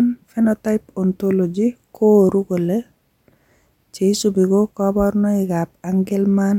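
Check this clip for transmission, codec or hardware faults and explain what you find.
Nothing stood out on listening to this speech recording.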